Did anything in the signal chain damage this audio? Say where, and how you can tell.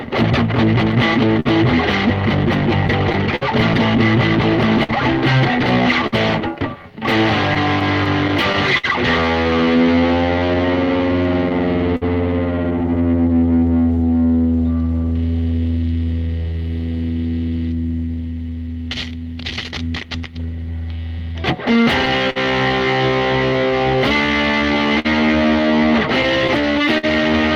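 Yes, the damage happened at the network and jitter-buffer stage, not in the analogue or converter path.

Clock drift between sender and receiver runs through the whole clip. The sender's clock runs about 4 percent slow, so the receiver's buffer keeps draining. You hear recurring timing hiccups at uneven intervals. On a waveform, short stretches repeat where the receiver pads the stream.

Repeated timing corrections appear from 1.28 to 26.62 s. Playback runs at 99 percent speed, and roughly 300 ms is added in total through small inserted repeats, all lengthening the audio. A spectrogram shows brief duplicated frames at irregular spacing.

Scattered short gaps occur from 0.91 to 8.85 s (around 15, about 400 ms filled) and from 13.95 to 27.05 s (around 20, about 300 ms). Each is at most around 50 ms. Lost or late packets were concealed by extending the last sound, which appears as smeared, frozen spectral columns.

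Repeated stalls (stutter) occur between 11.24 and 12.03 s. The buffer ran empty three times, filling 74 ms in all (the longest was 52 ms), which is 9 percent of that span. Nothing is missing, but the audio drags. The waveform shows repeated segments at each stall.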